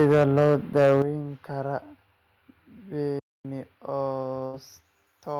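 From the start to 1.02 s, the loudest syllables carry a harsh, crackling edge, with peaks running about 7 dB past the ceiling and roughly a tenth of the samples flattened. This is microphone overload, likely from an input volume set too high, so the converter shears off the waveform tops.

At 1.02 s the speech and its background drop together by about 9 dB in a single step, right as the distorted stretch ends. This is the microphone volume stepped down, likely the call software reacting to the clipping by cutting the device's input level at once.

From 3.19 to 3.45 s the speech halts mid-flow and the output goes silent for about 0.25 s before carrying on. This is a playback stall, likely the player running dry of data or its thread being blocked until it recovered.

Between 4.45 and 4.55 s, a burst of packet loss leaves the last sound smeared forward as a fading fill for about 76 ms. Speech then resumes further on, with roughly 80 ms of the original simply missing.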